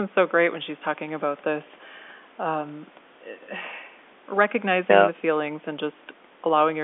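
Telephone-band speech with no technical faults to report.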